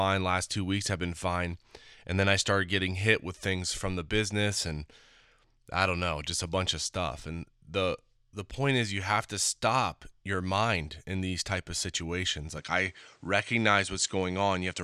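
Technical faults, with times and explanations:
12.57–14.84 s, input likely switched to a poorer device: right after "these type of situations" the speech turns duller, with nothing above 9.8 kHz, and a faint new noise floor appears. There's no gap and the level barely moves, so it's the narrower band giving it away.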